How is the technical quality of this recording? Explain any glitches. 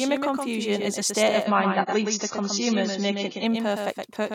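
The recording has two clear faults: a doubled audio track and a stretch of lower-bitrate streaming.

The doubled audio track runs through the whole clip. A second copy of the speech trails about a tenth of a second behind, roughly 5 dB quieter. It is likely captured twice via a slower path. It sounds like a dry, flat echo with no room tail.

The adaptive stream drops to a lower bitrate from 1.46 s to 3.46 s. The connection slowed, so a leaner version played. Nothing above 7 kHz survives there. The speech turns dull and warbly, switching suddenly, without a gap.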